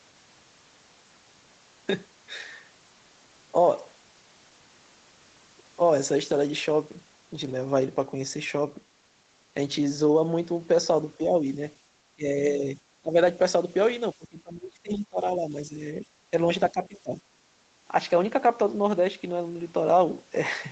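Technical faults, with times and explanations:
11.18 to 17.19 s, speech suppressed in double talk: the speech dips at 11.18–11.35, 12.15–12.27, 13.02–13.16, 14.14–15.81, 15.97–16.05 and 16.71–17.19 s, by roughly 5 to 25 dB, longest for about one and a half seconds. This is likely the echo canceller mistaking overlapping far-end talk for its own echo and turning the talker down. It differs from gating because the voice itself is cut, in uneven pieces.
17.47 to 17.62 s, background gated by the echo canceller: for about a tenth of a second the room sound beneath the speech drops by about 6 dB and then returns. The canceller clamps the microphone while the loudspeaker plays. It is brief and shallow, and it hits the background rather than the talker.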